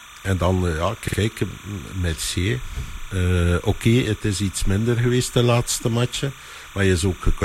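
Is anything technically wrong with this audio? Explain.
Yes, there are two faults.

Timecode bleed runs through the whole clip. Linear timecode at 29.97 frames per second has leaked in from a nearby track or cable, sitting roughly 20 dB below the speech. Its square wave flips between tones near 1 and 2 kHz, so a steady chirping warble hangs behind everything. Unlike mains hum or a single whine, it is a rhythmic two-pitch pattern locked to the frame rate, and it never stops.

Repeated frames occur from 1.07 to 1.17 s, just after "en dan eh ja". A short run of compressed audio, which fits blocks of about 42.1 ms, was decoded again, playing two extra times and adding 104.5 ms to the clip. The result is a quick stutter. A dropout or underrun would leave a gap instead, but here the same sound recurs.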